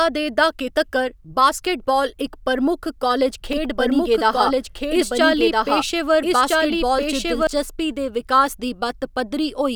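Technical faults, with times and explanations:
3.53 to 7.47 s, doubled audio track: A second copy of the speech runs about one and a half seconds behind the first, at roughly the same loudness. The two copies overlap. The copy is full-band and dry, with no decay or room sound, so it is not an echo. It cuts in and out abruptly at both ends. The likely cause is the signal being captured twice through a slower second path.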